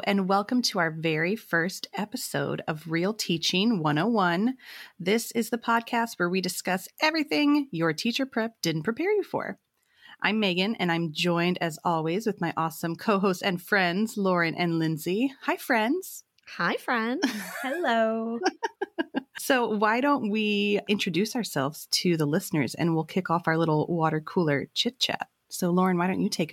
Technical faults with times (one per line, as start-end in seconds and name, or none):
none